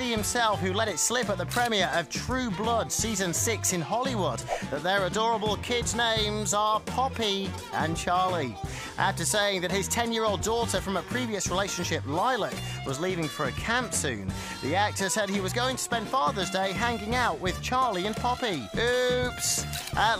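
Dropped samples at 2.51 s and again at 18.05 s: each is a single sharp click. The likely cause is a tiny gap, a fraction of a millisecond, missing from the stream, so the waveform jumps abruptly to a later value without removing any audible sound.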